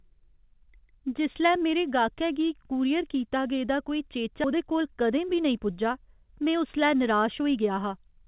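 Speech over a narrowband call path, with no content above 4 kHz, consistent with G.711 mu-law. A skip ahead at 4.44 to 4.46 s, right after "कूरियर कीता गेदा कोई", drops around a second of audio with no fill, so the speech jumps forward almost seamlessly. A jitter buffer speed-up at 4.54 to 5.70 s and again at 6.39 to 7.92 s trims pitch periods to run about 107% fast at unchanged pitch, removing roughly 100 ms each time and sounding hurried.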